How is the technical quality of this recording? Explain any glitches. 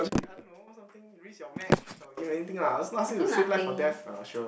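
The technical quality of this recording shows no glitches to explain.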